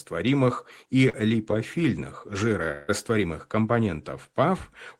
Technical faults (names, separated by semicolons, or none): short concealed packet loss; long network dropout